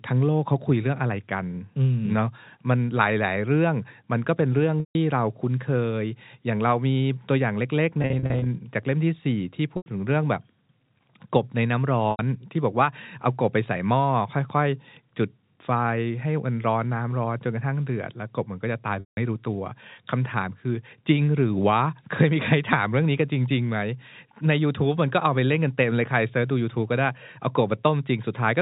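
Packet loss with pitch repetition occurs at 4.80–4.95, 8.02–8.46, 9.77–9.86, 12.11–12.19 and 19.00–19.17 s, over the telephone-band G.711 audio. Missing stretches were bridged by repeating the last pitch period and fading it out. The 80–170 ms gaps fade to silence before the sound cross-fades back. At 8.02 s, 260 ms of losses scattered in runs of up to 40 ms give brief, buzzy held fragments.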